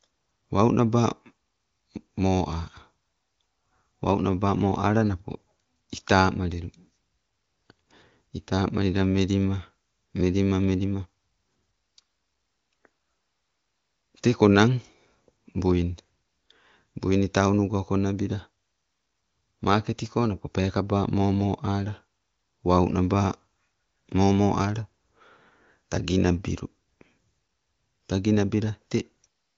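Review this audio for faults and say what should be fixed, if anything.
Nothing here needs fixing: the speech comes through an AMR wideband (HD Voice) path, with the top end stopping at about 7 kHz as that codec's band limit sets it, and the sound fits one of its higher bitrates.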